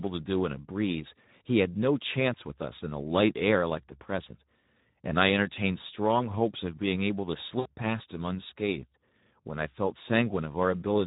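From the start, the speech carries Speex codec damage, plainly audible. The rate points to about 11 kbps, too few bits for the excitation. Voices sound noisy and hoarse. Any content above 8 kHz is only shaped noise.

At 7.59 s comes VoIP packet loss concealed by the speech codec, lasting to 7.67 s. About 60 ms of audio went missing. The decoder stretched its last pitch and filter, fading the gain. The gap sounds like a fading buzz or coloured noise.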